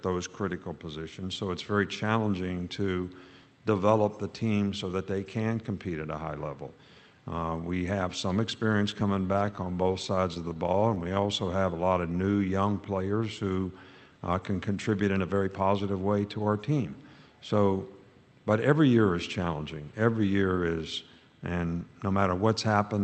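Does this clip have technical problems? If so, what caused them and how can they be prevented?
Yes. There are three kinds of fault, all caused by packet timing on the receiving side of a call path. The path itself sounds band-limited to about 8 kHz, which fits Opus at a modest bitrate.

Repeated stalls (stutter), 8.91 to 11.18 s: packets kept arriving late or more slowly than playback, so the jitter buffer emptied 30 times. Each time, the receiver stretched the last sound to bridge the gap. The longest gap was 12 ms and 311 ms was filled in total, about 14 percent of that span. Nothing is lost, but the sound drags and stutters. A steadier network route, or a larger minimum jitter-buffer target, would prevent this.

Jitter buffer slow-down, 11.21 to 12.47 s: right after the stalls the buffer was low, so the receiver rebuilt its reserve by repeating single pitch periods. This added 168 ms and played the audio at 87 percent speed without changing pitch, so sounds are audibly drawn out. 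Giving the buffer more headroom before it runs low would prevent this.

Jitter buffer speed-up, 14.29 to 15.62 s and 21.60 to 22.14 s: the buffer had filled beyond its target, as happens when delayed packets arrive together. To cut the delay, the receiver removed short pitch-period pieces, about 150 ms at 112 percent speed and then about 70 ms at 114 percent. The audio sounds hurried at an unchanged pitch. Reducing bursty packet delivery would prevent this.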